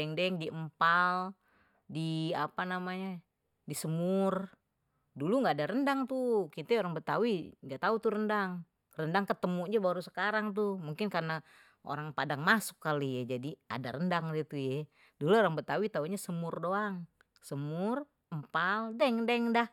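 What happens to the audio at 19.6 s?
Nothing goes wrong at 19.6 s; the audio there carries on cleanly, with no dropout, click, distortion or other fault.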